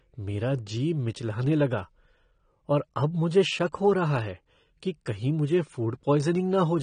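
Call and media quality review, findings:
Speech dull and smeared for the whole clip. No content above 9.8 kHz. Fizzy, warbling texture on sibilants and held vowels. Likely cause: AAC compression in the encode path. The sound fits AAC-LC near 32 kbps. Encoder lowers cut-off and starves bands of bits. Spectral holes and noise-filled bands result.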